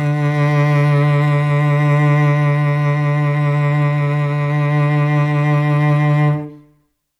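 Music, and no technical faults are audible anywhere in the clip.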